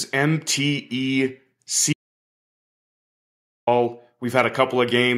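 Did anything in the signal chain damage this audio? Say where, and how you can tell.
Yes: an audio dropout to silence from 1.93 to 3.67 s, likely a lost input connection while recording continued. The waveform goes flat and silent, and the spectrogram goes blank with no room tone.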